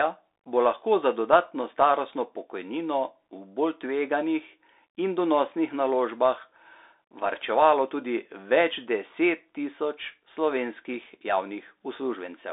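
A speech clip passed through the Bluetooth CVSD headset codec for its whole length, a one-bit, adaptive-step scheme whose sound fits a 64 kbps stream. The band is held to roughly 300 Hz to 3.7 kHz, with nothing above 4 kHz, and granular hiss and scratchy, slope-overloaded s sounds are plainly audible.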